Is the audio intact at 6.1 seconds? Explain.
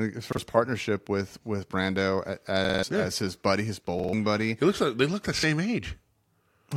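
Yes, the audio is intact at 6.1 seconds, with no dropout, click, distortion or other fault at that moment.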